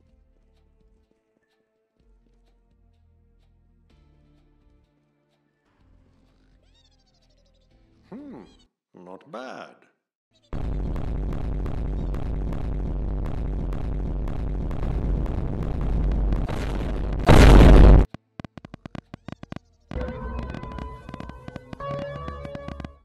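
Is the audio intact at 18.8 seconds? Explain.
No. At 18.8 seconds the audio sits inside a train of clicks running from 16.04 to 22.86 s. Short pulses of much the same shape arrive about 10 times a second at an uneven spacing, roughly seventy in all, peaking at about the level of the signal itself. The likely cause is interference from nearby equipment or a faulty connection or power supply. It is heard as ticking that continues through the pauses. That sets it apart from clipping, which follows the sound's own peaks, or dropouts, which cut gaps into the sound rather than adding pulses.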